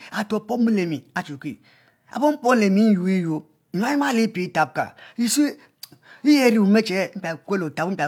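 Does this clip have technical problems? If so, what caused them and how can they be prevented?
No, nothing in this speech recording points to a technical fault, so there is no cause to trace and nothing to prevent.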